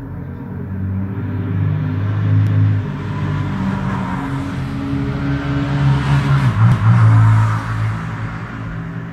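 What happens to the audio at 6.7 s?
At 6.72 s the audio hits an overlapping-chunks fault: it is handled in 4 s blocks, and the next block begins 250 ms before the previous one ended. The span from 6.72 to 6.97 s therefore plays twice, heard as a stutter or click at the join.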